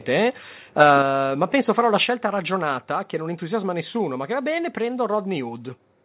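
From 0.8 to 0.96 s, just before "penso farò la", the loudest syllables break up with a hard, crackling edge. This is microphone overload: the input volume was likely set too high, and the peaks pushed past the converter's ceiling by about 4 dB, so their tops were flattened, affecting a small share of samples. Unlike codec distortion, it tracks the level of the voice and appears only on those peaks.

At 1.02 s the whole sound, voice and background together, drops abruptly by about 5 dB, and at 2.04 s, between "penso farò la" and "ragionata che non entusiasma", it drops again by about 3 dB. This is the microphone volume stepped down, likely by the call software reacting to the clipping. What sets it apart from a fade or from speaker dynamics is the instantaneous step that holds at the new level. Throughout, the band stops at 4 kHz, which fits a G.711 narrowband call path.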